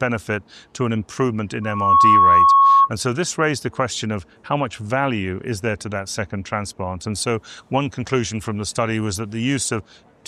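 A microphone picked up the loudspeaker it was driving, and the loop's gain went above unity at one frequency, causing loudspeaker feedback squeal from 1.62 to 2.90 s. A pure tone near 1.1 kHz rises out of the audio over about a third of a second and settles at roughly 10 dB above the programme. It then lasts until 2.90 s.

From 7.16 to 9.69 s, pre-emphasis was left on. The treble boost applied for recording, with a shape consistent with the CD 50/15 µs curve, was never reversed by the matching de-emphasis on playback. As a result, 10 kHz sits about 8 dB higher relative to 1 kHz than it should. That section sounds thin, glassy and overly bright, with sharpened sibilant edges, before the balance returns after 9.69 s.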